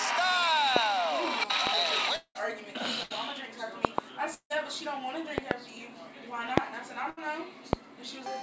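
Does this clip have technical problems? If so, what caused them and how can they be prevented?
Yes. Loud pops occur at 0.76, 1.67, 3.85 (a pair ending near 4.01), 5.38 (a pair ending near 5.53), 6.58 and 7.73 s, peaking roughly 20 to 25 dB above the sound. These are likely voltage transients from a connector, switch, static discharge or driver glitch, with the sound continuing underneath. Securing cables, using grounded connections and muting before switching prevents them.

A long network dropout appears at 2.16 to 2.38 s and again at 4.34 to 4.53 s. The receiver holds the last sound as a fading buzz or hiss for about 190 ms and 160 ms, then briefly goes silent before the audio resumes with about 200 ms and 160 ms missing. The likely cause is a stall in the network path. A wired connection and network QoS that prioritises call traffic prevent it.

A burst of packet loss occurs at 3.03 to 3.13 s and at 7.10 to 7.20 s. 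About 80 ms of audio is lost each time, and roughly 70 ms of it is bridged by a decaying continuation of the previous sound before playback resumes further along. Forward error correction, together with a less congested link, reduces these gaps.

The band limit at 8 kHz fits a G.722 call codec at 64 kbps.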